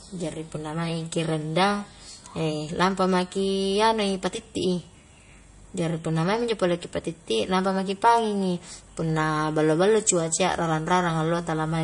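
From start to finish the speech carries plainly audible damage that is likely MP3 compression at a low bitrate, around 40 kbps. Everything above 10.6 kHz is gone, and on a spectrogram that shows as a flat, hard ceiling. Below it the upper bands look patchy, with weak components blinking in and out frame by frame. That flicker makes the sound watery and swirly. The s sounds turn metallic and chirpy, and consonant onsets smear in the waveform.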